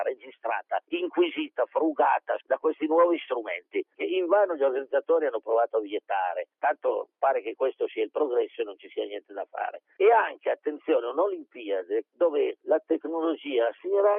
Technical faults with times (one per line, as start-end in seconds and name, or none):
0.15-0.45 sound cut by the noise suppressor